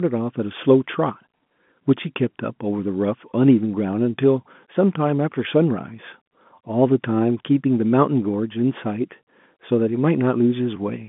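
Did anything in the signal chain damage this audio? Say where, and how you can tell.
No, the speech arrives as a normal G.711 telephone signal, with the band-limited character of a phone line, roughly 150 Hz to 3.5 kHz and nothing above about 3.8 kHz, and the codec itself adds no more than faint damage.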